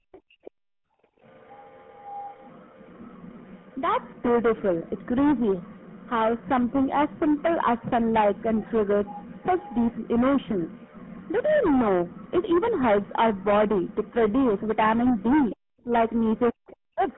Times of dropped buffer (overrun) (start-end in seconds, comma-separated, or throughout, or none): none